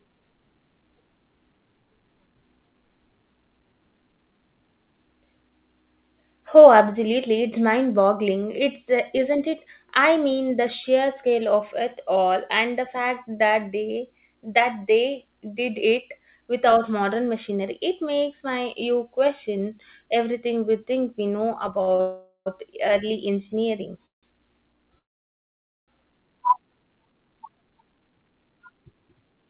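Right after "we think we know", 21.82 to 22.01 s stutters: the jitter buffer kept running dry, so four short gaps got padded with repeated sound, the longest 53 ms. That rolls straight into a call audio freeze from 22.01 to 22.48 s, a fading buzz before "early engineering" resumes. More freezes follow after "early engineering" at 24.06 to 24.25 s and 24.99 to 25.90 s, mostly silent, likely from packets held up in transit. From 27.05 to 29.43 s a jitter buffer speed-up trims about 0.3 s, so the sound runs roughly 12% fast and hurried at unchanged pitch.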